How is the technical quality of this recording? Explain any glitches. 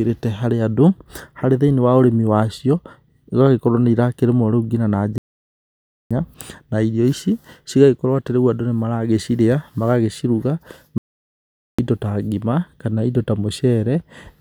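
The speech is broken up by two playback stalls. At 5.18 s and again at 10.98 s the sound simply cuts to silence for about 0.93 s and then 0.81 s, resuming at 11.79 s on "ĩndo ta". That's likely the player starving for data or its thread getting blocked.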